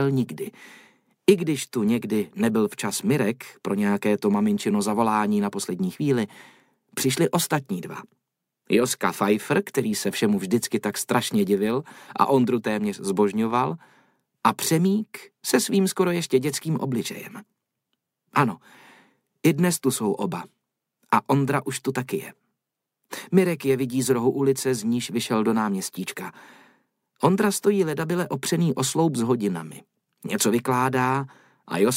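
Nothing here goes wrong at any point, so there's no technical fault to point to anywhere in the clip.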